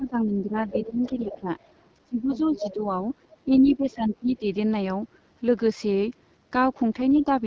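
A speech clip carried throughout by the AMR wideband (HD Voice) codec at 8.85 kbit/s, whose rough, raspy texture persists everywhere rather than appearing in bursts like packet loss. From 0.0 to 1.47 s, 2.05 to 2.89 s and 3.45 to 4.47 s the talker dips by up to about 15 dB, most likely speech suppressed in double talk, since each dip coincides with a second voice instead of falling randomly. That other side's voice leaking through is heard at 0.54 to 1.68 s, 2.33 to 2.73 s and 3.32 to 3.93 s, roughly 15 to 20 dB below the talker, with likely residual echo as the cause; it differs from background chatter by tracking the suppression.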